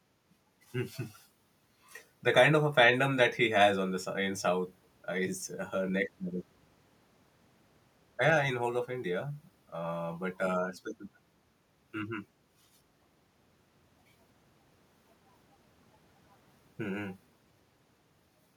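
No technical faults can be heard at any point in the clip, so there is nothing to describe in time order.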